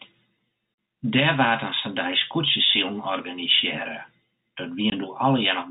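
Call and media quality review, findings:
Packet loss filled with silence: network dropped packets, receiver inserted silence. Hard-edged gaps in the speech at 0.74–0.78 s (40 ms, fits two 20 ms packets) and 4.90–4.92 s (20 ms, one packet). Band-limited G.711 telephone sound unaffected.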